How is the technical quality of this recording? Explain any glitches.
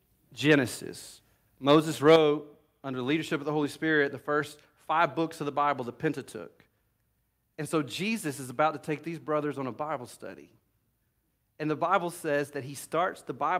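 The recording has three glitches, all early in the speech. Harsh, crackling peaks at 1.69–1.76 s and 2.07–2.16 s point to microphone overload, likely from input gain set about 4 dB too high, flattening the loudest peaks. At 2.16 s, voice and background suddenly drop about 6 dB together. That sounds like the microphone volume being stepped down, likely by the call software reacting to the clipping.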